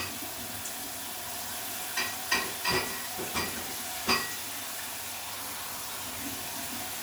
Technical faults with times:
none

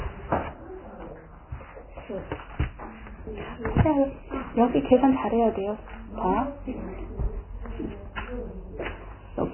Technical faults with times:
0.00-9.53 Vorbis compression

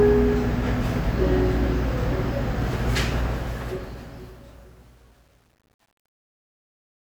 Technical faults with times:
3.18-7.06 truncation distortion on a fade

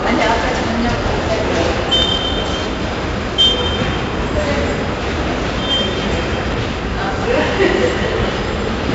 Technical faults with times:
0.00-8.94 4-bit ADPCM compression

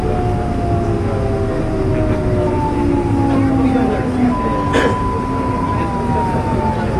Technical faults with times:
0.00-6.99 AAC compression

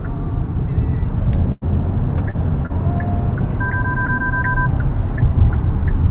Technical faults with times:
1.52-1.64 burst of packet loss
2.30-2.36 short concealed packet loss
2.66-2.72 short concealed packet loss

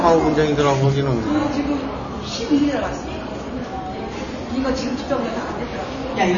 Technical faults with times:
0.00-6.37 AAC compression

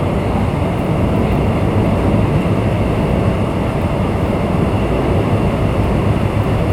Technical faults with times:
none

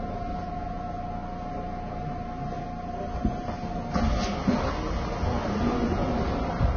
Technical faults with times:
0.00-6.76 Vorbis compression

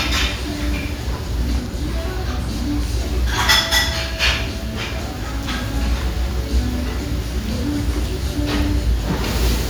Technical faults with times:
none

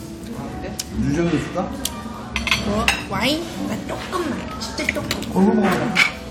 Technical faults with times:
none

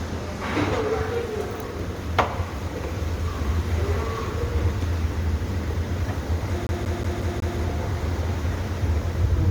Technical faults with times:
0.00-9.51 generation loss
6.67-7.58 CD stuck on one turn

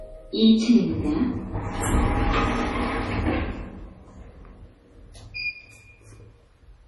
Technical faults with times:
0.00-6.87 MP3 compression

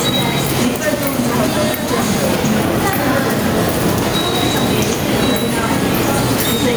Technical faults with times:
0.00-6.76 gain pumping
0.33 dropped samples

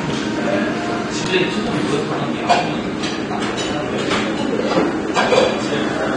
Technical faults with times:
0.00-6.16 AAC compression

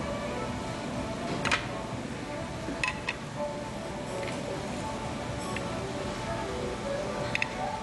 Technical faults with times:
0.00-7.83 Dolby Digital compression

